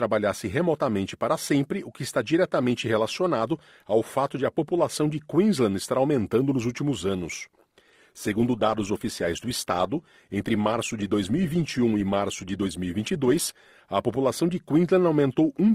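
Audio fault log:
7.76–13.76 s, adaptive stream at a lower bitrate: Right after "aumentando nos últimos anos" the speech quality drops suddenly, with no gap. Codec artefacts rise. Quality returns at "a população de", six seconds later. The player switched to a cheaper rendition while the connection slowed. The loss fits a step from Opus at 64 kbit/s down to 16 kbit/s.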